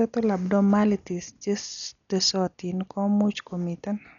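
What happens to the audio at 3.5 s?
At 3.5 s, as throughout, the speech is dull with nothing above 6.9 kHz and rough, fluttering noise, likely Dolby Digital compression at a heavy setting, fitting roughly 48 kbps, where unfunded lines get dither noise.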